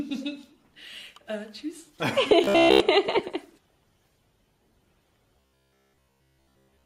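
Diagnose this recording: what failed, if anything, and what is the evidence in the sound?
From 2.44 to 2.80 s and again from 5.37 to 6.85 s, the sound collapses into a rigid, metallic buzz at 66.8 Hz: robotic sound from repeated short buffers. This is likely a driver or buffer underrun, with all output looping a roughly 15 ms block while fresh audio is skipped.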